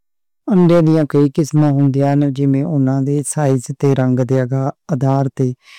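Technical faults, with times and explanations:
Throughout, hard clipping: the speech reaches a stage at about 9 dB more level than it can pass, so every peak is cut off flat at the ceiling, a few percent of samples in all. Those squared-off tops create harmonics reaching far above the speech band, so the peaks of loud syllables carry added distortion.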